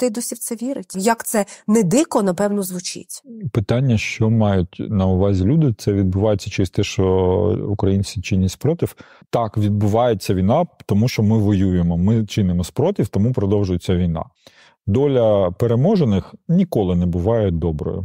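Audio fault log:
No faults can be heard anywhere in this speech recording.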